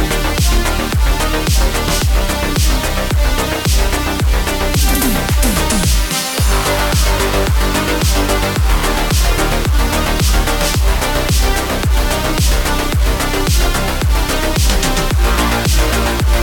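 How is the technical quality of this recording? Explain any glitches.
The technical quality is poor: heavy quantisation grit runs through the whole recording. This is low bit depth without dither. The coarse, grainy distortion rides on the sound and changes with it, sitting only about 15 dB below the signal, which fits a resolution of roughly 4 bits. The likely cause is rounding to very few levels with no dither, so the error tracks the waveform.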